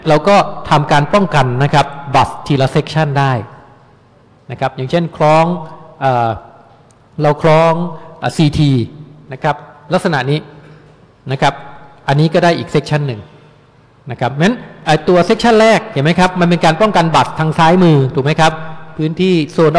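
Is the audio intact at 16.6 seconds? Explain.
Yes, the audio is intact at 16.6 seconds, with no dropout, click, distortion or other fault at that point.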